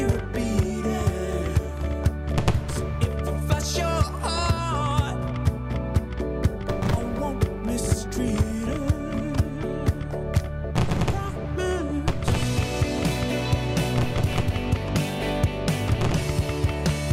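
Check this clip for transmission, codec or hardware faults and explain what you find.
Nothing stood out on listening to the clip, and there is nothing to report.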